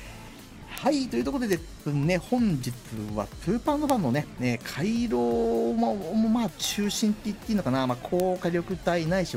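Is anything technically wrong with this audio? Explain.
Yes. Five bit error spikes at 0.78, 1.53, 3.90, 6.65 and 8.20 s are flipped bits jumping to about −4 dBFS. Each is a sharp tick: a lone waveform spike, a thin full-band spectrogram line.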